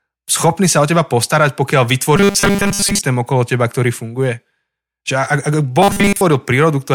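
From 2.16 to 3.01 s, just before "okolo teba ktorý funguje", and again from 5.82 to 6.21 s, the speech turns into a rigid metallic 200 Hz buzz. This is robotic sound from repeated short buffers, likely a 5 ms chunk replayed while most of the real audio is skipped.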